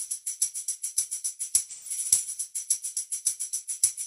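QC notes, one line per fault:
1.69–1.91 s, AAC frame loss with concealment: a smeared, noisy or phasey patch replaces the signal for this span. Roughly 128 ms of coded data is missing, which fits three consecutive lost frames. The decoder fills the gap by reusing the last good spectrum with altered signs and interpolated energy, so detail blurs. The loss is too short for concealment to fade fully to silence before normal decoding resumes.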